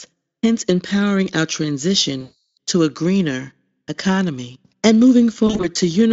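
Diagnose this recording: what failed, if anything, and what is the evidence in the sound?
Network packet loss, hidden by the Speex decoder's VoIP packet loss concealment. From 2.21 to 2.57 s about 360 ms of audio never arrived, and the decoder stretched its last pitch and filter state, lowering the gain frame by frame, so the speech smears and fades. From 5.47 to 5.77 s shorter gaps, none longer than 40 ms, produce brief weakened patches, and the speech stays thin until the decoder's state recovers.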